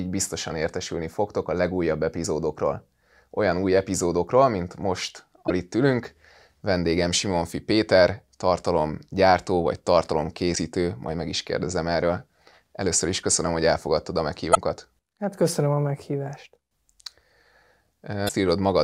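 Damaged data in a compressed stream breaks the decoder's reading of the file five times. At each spot it misreads or discards the corrupted frames, loses sync and has to search for the next valid frame header. Each one is heard as a short chirp or blip: a very brief one at 2.24 s, then slightly longer bursts from 5.45 to 5.51 s, 10.52 to 10.57 s, 14.51 to 14.57 s, and 18.25 to 18.31 s.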